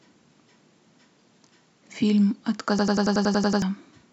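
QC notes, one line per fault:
2.79–3.62 s, system hang loop: a rigid machine-gun stutter as one 93 ms fragment repeats exactly nine times at 10.8 Hz, replacing roughly 0.7 s of speech. The system froze while the sound hardware kept replaying its ring buffer, which fits a 4096-sample buffer.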